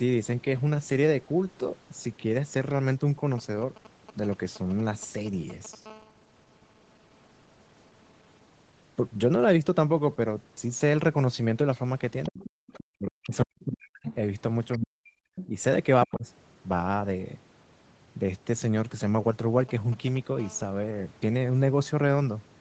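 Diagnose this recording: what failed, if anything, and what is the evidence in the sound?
A GSM phone buzz enters at the analogue wiring stage from 5.86 to 8.48 s: a hard, raspy 217 Hz buzz rich in harmonics, about 31 dB below the speech and nearly steady. A nearby 2G handset in a call is pulsing its transmitter, and the audio circuit rectifies those radio bursts into audible tone.

The other side's voice leaks through in the call processing stage at 11.74–14.15 s, and again in short scraps at 14.72–14.78, 15.35–15.47 and 16.03–16.14 s, sitting roughly 15 to 20 dB under the talker. The likely cause is loudspeaker playback reaching the microphone and surviving the echo canceller as residual echo.

Background gated by the echo canceller at 12.50–12.64 s. The room tone collapses by about 35 dB for roughly 150 ms, then snaps back. The canceller clamped the microphone path while far-end audio played and released it once it judged the loudspeaker quiet.

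Speech suppressed in double talk occurs at 12.92–14.08 s and 14.78–16.26 s. The talker dips by as much as about 40 dB in pieces, about a second in total for the first span and half a second for the second. This is likely the canceller attenuating near-end speech it could not separate from overlapping echo.

GSM signalling bursts appear from 19.60 to 20.41 s as a galloping run of brief 217 Hz buzzes, roughly 20 dB below the signal. The analogue path is again rectifying RF, this time from short idle-state signalling groups rather than continuous call transmission.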